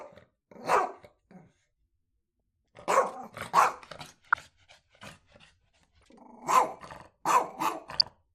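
The whole thing sounds dull and granular, with upper bands flickering out, which points to MP2 compression, likely at something around 80 kbps. DAB burbling then comes through at 0.72 to 0.79, 2.40 to 2.84, 4.18 to 4.48, 5.97 to 6.08 and 7.97 to 8.10 s, with bit errors of a few tenths of a percent putting short blips of noise into single sub-bands.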